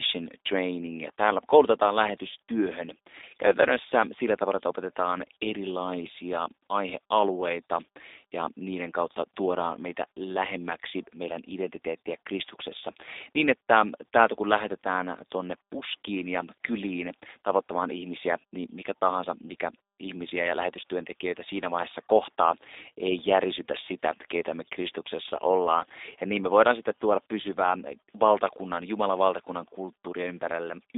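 From start to finish the speech runs through a G.729 codec. Nothing passes above 3.7 kHz, and the band sits near 250 Hz to 3.7 kHz. The voice is rebuilt from a filter, pitch predictor and sparse pulses. It sounds plainly rough and synthetic, consistent with an 8 kbit/s stream.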